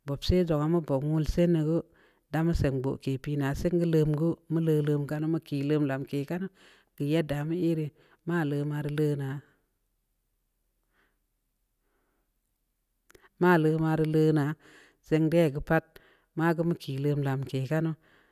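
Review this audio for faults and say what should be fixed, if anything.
No faults turn up anywhere in the speech, so nothing needs to be fixed. No change to the recording or playback chain is called for.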